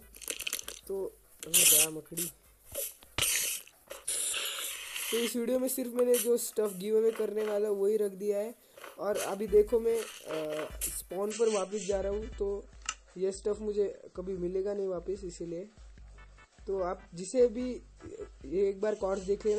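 From 11.31 s to the end of the clip, the sound abruptly turns duller and grainier, with no gap or stutter at the switch. Nothing remains above 8.3 kHz, and codec artefacts rise. This is an adaptive stream dropping to a lower bitrate: a slowing connection made the player switch mid-playback to a much leaner encoding of the same audio. The sharp loss of treble and rise in artefacts fits a step down from MP3 at 128 kbit/s to MP3 at 32 kbit/s.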